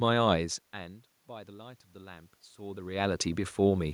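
From 1.27 s, automatic gain rising: after the input fell about 21 dB, the gain crept up about 5 dB, swelling speech and room noise together.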